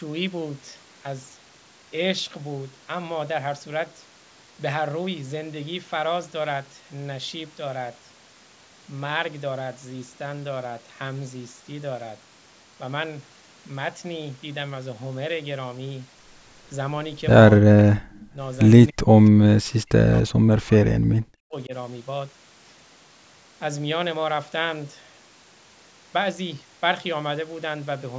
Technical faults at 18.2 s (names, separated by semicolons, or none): echo leak; speech suppressed in double talk